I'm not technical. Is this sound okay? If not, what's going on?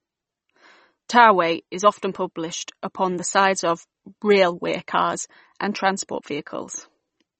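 No. The speech was likely squeezed hard with MP3 compression, which throws away detail to save space. Everything above about 8.3 kHz is gone throughout, so the speech sounds dull and watery, with swirly, metallic edges on s sounds.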